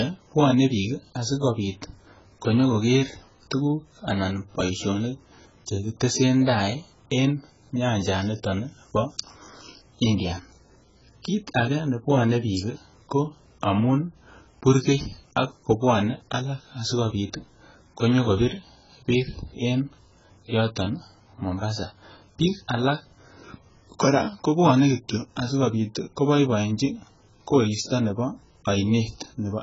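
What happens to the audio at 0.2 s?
At 0.2 s the speech already carries AAC compression damage, which runs through the whole clip. Nothing sounds above about 7.6 kHz, and the speech is dull, smeared and fizzy on sibilants. The likely cause is AAC-LC at a starved bitrate near 12 kbps.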